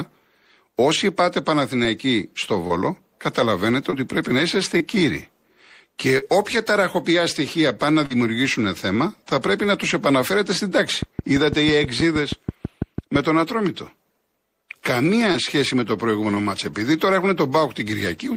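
Speech, marred by brief smears and wobbles at 2.67, 3.90, 4.78, 6.18, 8.06, 15.32 and 16.34 s, where a short consonant can drop out. This is short concealed packet loss: around 20 ms of audio (40 ms at 6.18 and 8.06 s) arrived too late to decode. The receiver papered over each gap by extending the preceding sound before blending back in. From 11.0 to 13.2 s a train of clicks ticks steadily over the speech and the pauses, about fifteen evenly spaced pops at 6.1 per second, peaking roughly 10 dB above the speech. Such uniform pulses likely come from electrical interference or a faulty connection or power supply.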